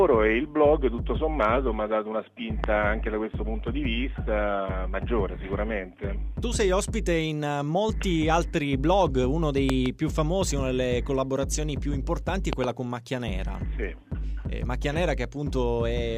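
A loud pop at 2.64 to 2.66 s, a double pop at 9.70 to 9.88 s and another at 12.53 to 12.66 s, likely from sudden voltage spikes, each about 15 dB above the sound, which continues underneath.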